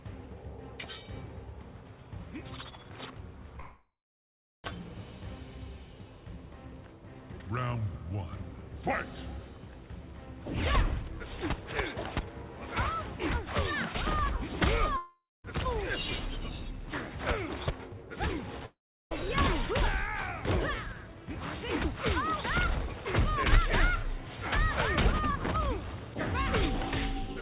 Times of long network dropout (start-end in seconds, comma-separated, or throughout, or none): 3.60-4.65, 14.97-15.45, 18.66-19.12